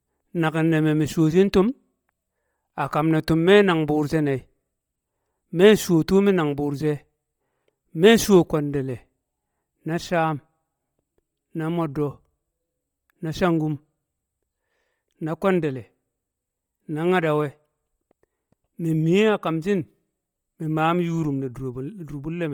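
Throughout the speech, the upper spectrum has a breathy, grainy edge, as if parts of it were replaced by hiss that follows the syllables in short steps. The likely cause is Bluetooth LC3 compression. At a low bitrate, near 32 kbps, the transform coder discards much of the high-frequency detail and fills the gaps with shaped noise. The stepping fits 10 ms frames. The damage is heavy, although content still extends to about 20.2 kHz.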